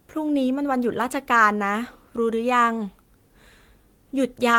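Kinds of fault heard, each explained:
No kinds of fault are heard in this speech.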